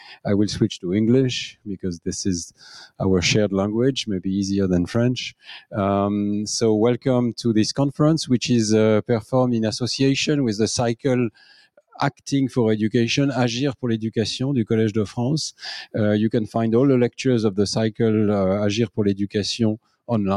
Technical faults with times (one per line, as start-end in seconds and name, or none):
0.00-20.36 noise suppressor applied to music or sounds
0.00-0.25 sound cut by the noise suppressor
1.52-1.68 sound cut by the noise suppressor
2.50-3.00 sound cut by the noise suppressor
5.30-5.74 sound cut by the noise suppressor
11.30-11.99 sound cut by the noise suppressor
19.78-20.09 sound cut by the noise suppressor